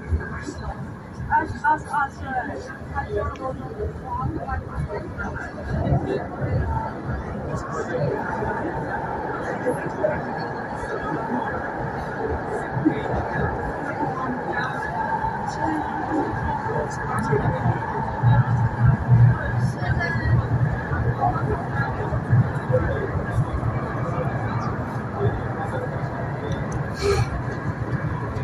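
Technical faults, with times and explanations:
No technical faults can be heard anywhere in this audio. There is nothing here that calls for a timed entry.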